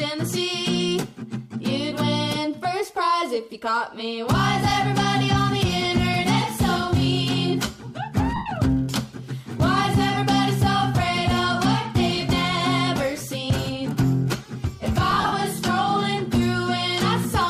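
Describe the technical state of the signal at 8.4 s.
At 8.4 s the signal is hit by lost LE Audio frames, between 8.36 and 8.51 s. About 112.5 ms of audio goes missing across that 150 ms stretch, with the longest unbroken run roughly a tenth of a second. The LC3 decoder fills each hole by replaying the last good spectrum with randomised signs, so tonal content smears into noise and then fades toward silence. A plain dropout would cut straight to silence or a click instead.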